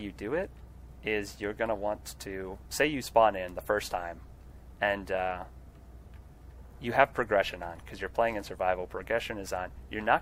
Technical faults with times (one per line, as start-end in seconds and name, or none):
none